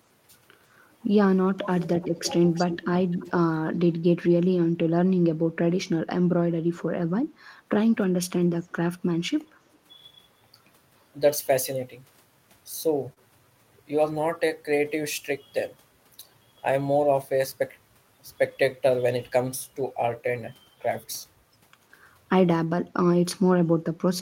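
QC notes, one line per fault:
1.55–1.69 s, speech suppressed in double talk: the talker's level dips sharply for roughly 150 ms, bottoming out about 25 dB down, while the far side is also speaking. This is likely the echo canceller failing to tell the local voice from loudspeaker echo during overlapping talk and attenuating everything it picks up, so the voice briefly drops away instead of staying steady.
1.81–2.33 s, 2.55–2.87 s, 3.11–3.31 s, 3.70–3.78 s, 8.64–8.75 s and 9.74–9.78 s, echo leak: a delayed copy of the voice returns in scraps. The first four trail the original by 339 ms, at about 10 to 20 dB below the speech. The last two trail by 356 ms and are far quieter, about 35 to 40 dB down. This is likely residual loudspeaker pickup at the far end that the canceller did not fully remove and sent back.
13.13–13.19 s, short concealed packet loss: about 20 ms of audio never arrived, and the decoder bridged the hole by extending the preceding sound for about 29 ms before blending back into real signal, trimming about 8 ms in the process. 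The result is a brief smear or wobble where the synthesized continuation stands in for the missing sound.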